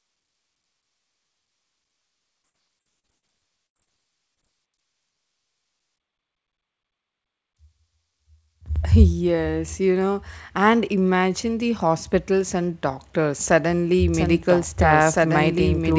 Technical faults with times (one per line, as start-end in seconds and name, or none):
2.42-3.24 repeated packet loss (robotic sound)
3.66-3.77 burst of packet loss
3.77-3.88 short concealed packet loss
4.34-4.39 short concealed packet loss
14.14-15.98 doubled audio track